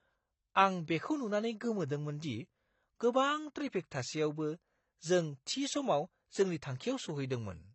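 Throughout, the speech sounds dull and warbly with nothing above 8.1 kHz, likely AAC compression squeezed to a low bitrate, which fits about 24 kbps.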